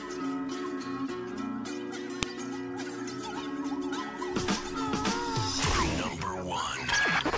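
File header played as audio, at 2.23 s: a single sharp, loud click snaps out of the sound at this point, lasting only a couple of milliseconds. It marks a join where a second WAV piece was attached or streamed on without its header being stripped, so the few dozen bytes of file metadata were read as sample values. Those bytes bear no relation to the waveform around them, which is why the snap cuts through regardless of what the signal is doing.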